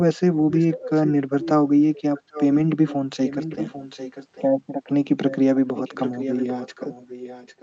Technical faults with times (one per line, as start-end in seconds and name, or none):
0.34-1.09 echo leak
1.41-1.51 echo leak
1.95-2.69 echo leak
3.25-4.45 echo leak
5.29-5.36 echo leak
5.75-7.62 echo leak